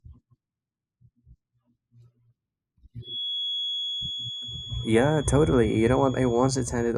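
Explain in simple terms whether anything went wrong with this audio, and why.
Throughout the speech there is a slowly moving swirl, like a gentle jet-plane whoosh. This is channels drifting apart. The left and right sides were recorded on devices whose clocks ran at very slightly different speeds, roughly twenty parts per million. So one side slowly falls behind, reaching a fraction of a millisecond by the end, and mixing them makes that sweeping flanging sound.

From 3.0 s to the end there is a thin, steady whistle at 3.4 kHz, a high tone sitting behind the speech and only a little quieter than it, swelling and fading slowly in loudness. This is a feedback whistle. The likely cause is a loudspeaker's sound reaching the microphone and going round the loop again. It sits right at the edge of feedback, so one pitch keeps ringing without building into a full squeal.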